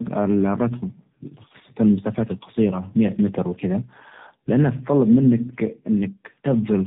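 Speech with tandem speech coding throughout: two speech codecs in series make it rough and warbly, and a spectrogram shows nothing above 3.7 kHz.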